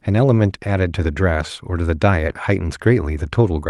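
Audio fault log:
The speech arrives over a WebRTC call path with its top end ending near 12 kHz, consistent with Opus at a fairly generous call bitrate, and nothing in the signal departs from what that path normally delivers.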